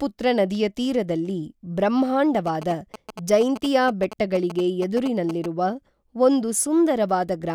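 From 2.47 to 5.46 s there's GSM signalling bursts: a nearby 2G phone handshaking, its radio bursts rectified by the audio circuitry. You hear a galloping dit-dit-dit of short 216.7 Hz buzzes, sitting roughly 10 dB under the speech.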